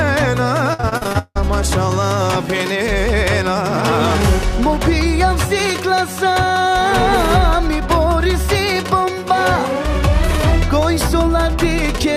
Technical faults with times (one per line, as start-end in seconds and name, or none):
0.73-1.37 repeated packet loss (robotic sound)